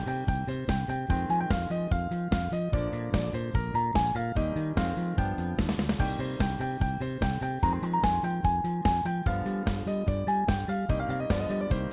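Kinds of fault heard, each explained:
No faults can be heard anywhere in this audio.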